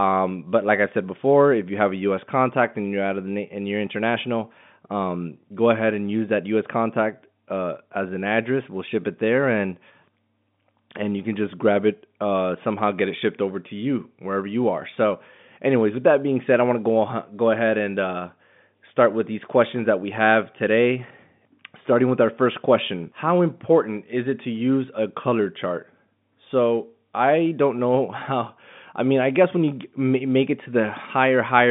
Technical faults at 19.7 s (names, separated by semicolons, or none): none